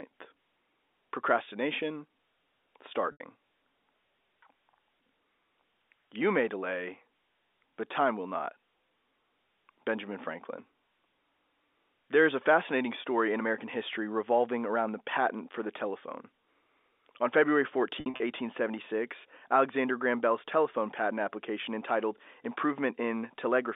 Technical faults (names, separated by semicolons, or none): packet loss with pitch repetition